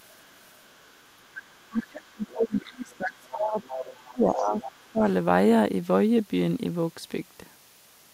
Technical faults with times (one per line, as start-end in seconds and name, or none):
0.10-2.33 other side's voice leaking through
1.70-5.04 speech suppressed in double talk
3.28-3.98 other side's voice leaking through
4.38-5.11 other side's voice leaking through